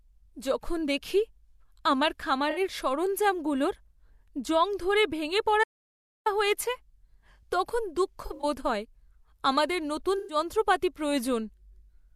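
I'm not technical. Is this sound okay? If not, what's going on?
No. There are two kinds of fault in this speech.

Audio dropout to silence: after "জং ধরে ভেঙে", from 5.64 to 6.26 s, the sound goes totally dead, with not even room noise. The input was likely lost briefly, so that bit of speech is gone.

Corrupt frame concealed: at 2.50 to 2.60 s, after "তখন দুঃখ" at 8.26 to 8.45 s, and after "আমাদের নতুন" at 10.18 to 10.37 s, damaged data made the player patch over the gap.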